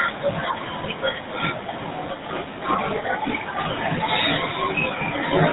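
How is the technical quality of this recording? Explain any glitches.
Quality's held back by one fault that runs through the whole clip: the GSM full-rate codec. The speech has been squeezed through a low-rate mobile voice coder, and the roughness fits a 13 kbps full-rate stream. That coder models the vocal tract and drives it with a sparse train of regularly spaced pulses, keeping only a third of the excitation detail. The result is a plainly audible buzzy, gravelly texture on the voice, and it sounds dull because nothing comes through above about 3.9 kHz.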